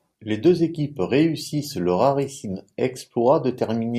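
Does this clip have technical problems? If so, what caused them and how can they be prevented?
No, this clip has no technical problems that can be heard. With nothing going wrong, there is no cause to trace and nothing to prevent.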